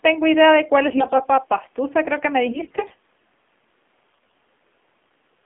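Throughout, the speech was coded with the AMR narrowband mobile codec at a low rate, which fits the 7.4 kbps mode, in a 200 Hz to 3.5 kHz band, leaving it plainly buzzy and synthetic. At 0.90 to 1.27 s, 2.52 to 2.95 s and 4.12 to 4.34 s, AMR bit errors corrupted the weakly protected frame bits at rates of several percent. Misplaced excitation pulses and wrong fine parameters make the voice turn hoarse, scratchy and gargly while keeping its pitch and level.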